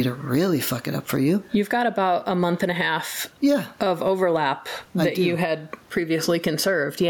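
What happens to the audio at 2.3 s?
At 2.3 s the speech is in the middle of gain pumping that runs through the whole clip. The level swings by around 10 dB, which makes the speech sound squashed. The likely cause is input gain set far too high, with a fast limiter or compressor clamping down on each peak. Room noise also sits about 41 dB below the speech.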